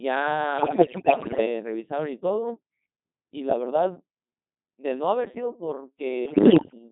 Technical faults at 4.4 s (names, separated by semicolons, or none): Codec 2 vocoder